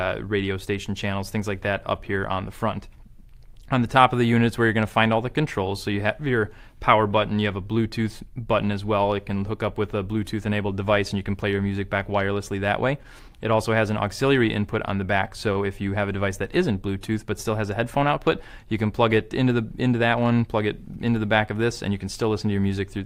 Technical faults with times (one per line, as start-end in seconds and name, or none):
13.28-13.41 short stall from a late packet